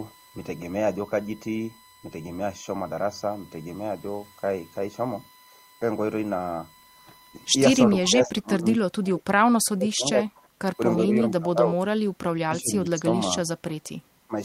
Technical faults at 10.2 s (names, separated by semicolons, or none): USB whine; speech suppressed in double talk